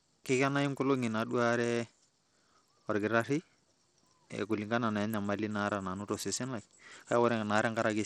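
From start to finish the speech sounds gritty and thin, with its upper treble dropping in and out so that sibilants flicker rather than holding steady, and a rough granular noise and aliasing ride along with every syllable. The damage is plainly audible. The likely cause is Bluetooth SBC compression at a starved setting, which fits a low bitrate around 80 kbps: the weak top sub-bands receive almost no bits, while the remaining bands are quantised coarsely.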